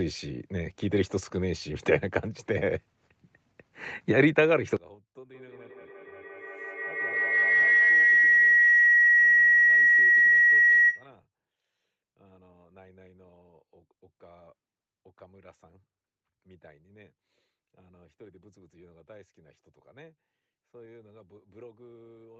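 From 4.76 s to the end, the centred speech collapses by about 27 dB, leaving only a faint residue; this points to one channel inverted, likely, so the matching content in both channels cancels when the stereo is folded down to mono.

Between 5.33 s and 11.14 s a feedback howl rises near 2 kHz, with the loop repeating roughly every 150 ms and the howl peaking about 3 dB above the speech. Sound leaked from loudspeaker back into microphone, gaining level on each pass until the loop narrowed to one ringing tone.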